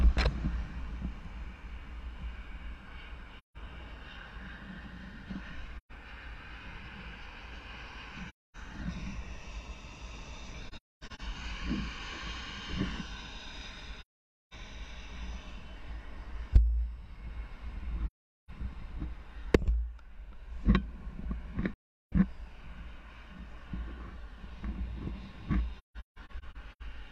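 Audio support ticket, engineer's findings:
Soft-edged dropouts, fading out and back in: 3.38, 5.77, 8.28, 10.68 (broken up), 14.01, 18.06, 21.73, 25.78 s (broken up, over about 1 s). Holes of 0.13 to 0.51 s. AAC frame loss with muting: the decoder zeroes the lost spectra, and overlap-add smooths the edges.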